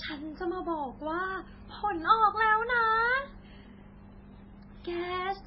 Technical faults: transcoding between lossy codecs

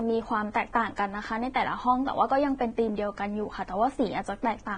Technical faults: Vorbis compression

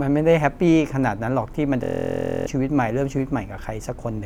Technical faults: system hang loop

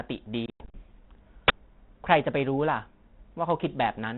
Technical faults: packet loss on an ADPCM call; uninitialised buffer

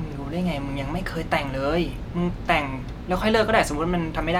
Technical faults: none

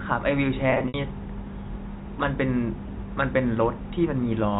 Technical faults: packet loss with pitch repetition

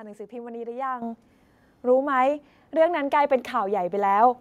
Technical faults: microphone volume stepped up

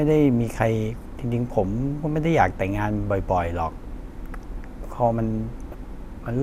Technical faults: DAB burbling

